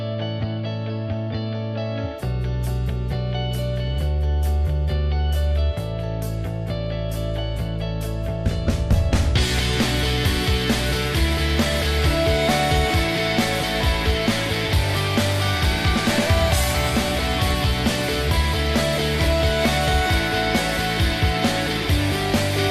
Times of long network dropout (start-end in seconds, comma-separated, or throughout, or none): none